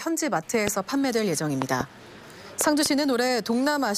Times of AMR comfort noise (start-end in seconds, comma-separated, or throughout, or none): none